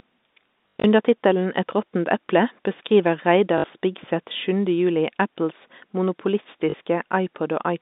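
Telephone-band speech, and there's packet loss with the last packet repeated in three places: 0.68 to 0.84 s (about 120 ms lost, longest run 80 ms), 3.58 to 3.64 s, and 6.70 to 6.74 s. Each gap stutters robotically with a 50 Hz buzz, which fits 20 ms packets over the G.711 line.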